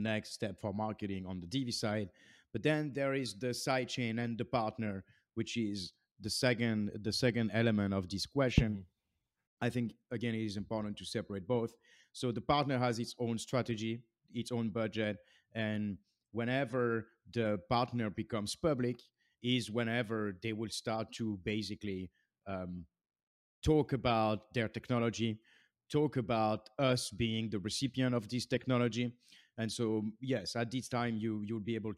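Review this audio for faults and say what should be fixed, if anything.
Nothing in this audio needs to be fixed, as it has no faults.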